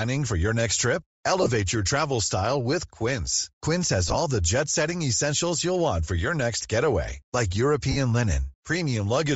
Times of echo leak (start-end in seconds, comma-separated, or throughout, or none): none